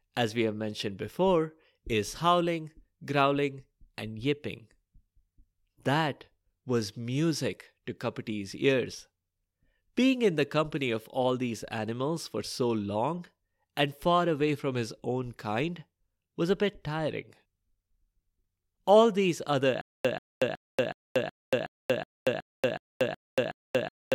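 Stutter with silent gaps runs from 19.81 s onward, just after "these other": a 137 ms fragment repeats eleven times every 370 ms with 233 ms of digital silence between, likely a stalled stream replaying its last buffer, so the remaining speech is lost.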